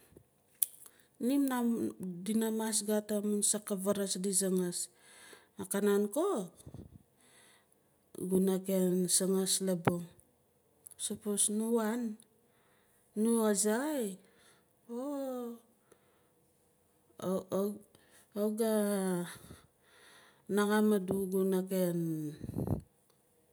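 No technical faults can be heard anywhere in the recording.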